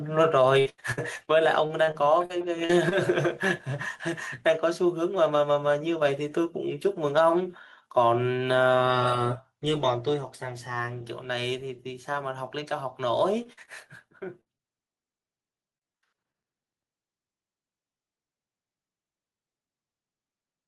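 Gain pumping runs through the whole clip. The level swings by a few decibels. The likely cause is gain set too high, with a fast limiter pulling it back.

Repeated packet loss with a robotic sound starts at 0.59 s and lasts to 1.29 s. Packets keep going missing. Each hole is patched by stretching the last sound. About a third of this stretch is fill, with gaps up to 85 ms. It sounds choppy. A second patch follows from 1.67 to 2.93 s. It is lighter, with about 13% filled and gaps no longer than 37 ms.

Zipper noise appears from 9.28 to 10.72 s. The level falls by roughly 15 dB. It moves in hundreds of tiny steps each second, with no smoothing. Each step leaves a faint click. Together the clicks form a fine zipping texture over the fade.

Short concealed packet loss follows at 13.43 to 13.47 s, 13.53 to 13.59 s and 13.65 to 13.69 s. Each gap is only 20 to 40 ms. The decoder bridges it by extending the last sound. 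Each one is heard as a quick smear or wobble.

A burst of packet loss hits from 14.41 to 14.48 s. About 40 ms is missing. The held fill fades as the gap goes on. The sound then jumps ahead, and the part in between is gone.

One more short concealed loss comes at 14.58 to 14.61 s. It leaves a brief smear of about 20 ms.

Repeated packet loss returns from 15.11 to 16.36 s. About 14% of the span is filled, in gaps up to 36 ms. The robotic, broken texture comes back.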